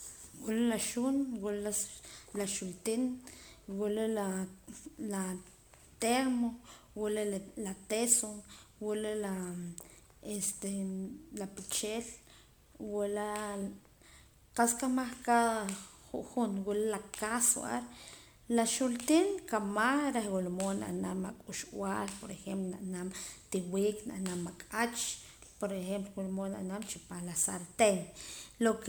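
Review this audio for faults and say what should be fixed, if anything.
Throughout, the speech sounds swirly, hollow and smeared with blurred attacks: generation loss, likely from about four 128 kbit/s MP3 re-encodes on shifting frame grids. To prevent it, edit from a lossless master and encode to MP3 only once, at the final step.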